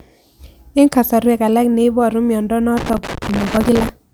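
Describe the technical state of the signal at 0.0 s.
At 0.0 s the signal is intact, with no audible technical fault at that point.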